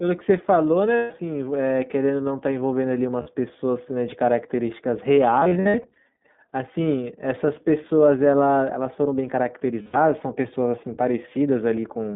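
Throughout, the speech is confined to about 150 Hz to 3.6 kHz and sounds clearly rough and synthetic. This is the iLBC codec, which codes each frame's excitation independently, consistent with 15.2 kbps and 20 ms frames. A spectrogram shows a hard ceiling near 3.6 kHz with empty space above.

Lost iLBC frames occur at 0.97 to 1.12 s (140 ms), 3.22 to 3.28 s (40 ms), across 5.40 to 5.96 s, where 280 ms of losses are scattered, the longest run about 70 ms, and 9.82 to 9.96 s (120 ms). The decoder repeats the last pitch cycle mixed with noise, so each gap sounds like a held, buzzy vowel that recovers immediately. On the waveform these gaps appear as repeated cycles, and on the spectrogram as frozen, smeared harmonics.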